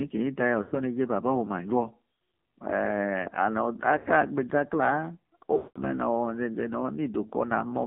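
Throughout, the audio carries the AMR narrowband mobile codec. Nothing sits above 3.4 kHz or below about 150 Hz, and the heavy buzzy, synthetic edge fits a low AMR-NB mode near 5.9 kbps, where a few pulses per subframe drive the vocal-tract model. A spectrogram shows a hard ceiling at 3.4 kHz, empty space above it, and smeared, blocky harmonics below.

Lost AMR speech frames then break the sound three times: 0.62 to 0.75 s, 3.98 to 4.10 s, and 5.58 to 5.80 s, spanning roughly 100, 80 and 180 ms. Each time the decoder repeats the last good pitch and filter settings at falling gain. The sound drags out and fades, and the longest gap sinks toward silence before a weak, rough return. A waveform shows a decaying envelope, and a spectrogram shows frozen, flat-lined harmonics fading out.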